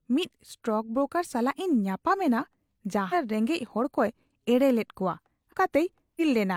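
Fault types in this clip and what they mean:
Damaged data in a compressed stream: The compressed speech stream contains corrupted bytes, so the decoder misreads the affected frames, loses frame sync and has to hunt for the next valid header before normal decoding resumes. In this clip it produces three short glitches that break the speech, at 3.09 to 3.14 s, 5.48 to 5.54 s and 6.17 to 6.21 s. Each lasts roughly 45 to 55 ms.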